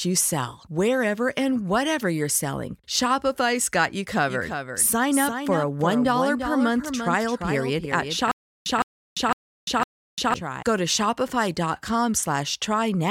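A doubled audio track runs from 4.27 s to 10.63 s. A second full-band copy of the speech trails the original by roughly 300 ms, sitting about 10 dB lower. It carries no reverb tail or room colour of its own, so it reads as a flat, detached echo. It cuts in abruptly at 4.27 s and drops out just as sharply at 10.63 s. Two copies held out of step, likely from a slower parallel capture path, would produce exactly this.

A stutter with silent gaps overlaps it from 8.31 s to 10.34 s. A 161 ms fragment of speech repeats four times at a steady period of about 506 ms, each burst followed by 346 ms of dead digital silence. The pattern points to a stalled stream that replays its last chunk on each retry before running empty. This is likely what happened here, and the speech that should have filled those stretches is lost.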